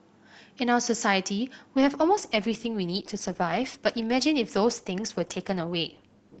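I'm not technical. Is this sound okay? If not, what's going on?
No. At about 1.75 seconds the stream switched down to a lower-quality version of the recording, an adaptive stream at a lower bitrate, which is what a player does when the connection slows and it has to send less data to keep going. There is no pause; the speech simply turns rougher from that moment to the end, with a warbly, processed quality setting in at once.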